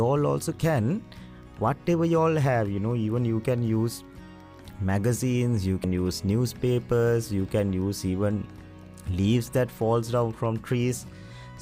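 At 5.84 s the audio has a brief blip from damaged data in a compressed stream: the decoder misreads corrupted frames, showing as a thin broadband vertical streak and waveform discontinuity.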